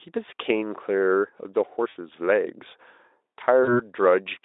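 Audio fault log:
1.89–1.97 s and 3.63–3.90 s, VoIP packet loss concealed by the speech codec: gaps of 60 ms and 40 ms are filled by the decoder stretching the last sound into a fading buzzy tone or coloured noise. Unlike a plain dropout, there is no hard silence or click, and the weakened sound lingers after packets resume.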